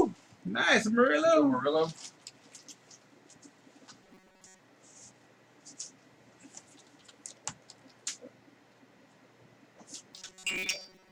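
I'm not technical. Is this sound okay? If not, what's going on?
No. From 4.02 to 4.60 s and again from 10.14 s to the end, the sound turns into a flat, metallic buzz at 188 Hz: robotic sound from repeated short buffers. New audio likely arrived too slowly, so the player kept replaying tiny 5 ms fragments, losing most of the real sound.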